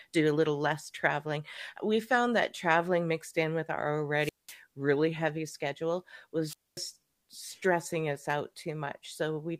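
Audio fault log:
4.17–4.59 s and 6.46–6.83 s, wireless microphone squelch dropout. Hiss rises as the radio signal fades. The receiver then mutes for about 0.2 s, then 0.24 s, before speech returns.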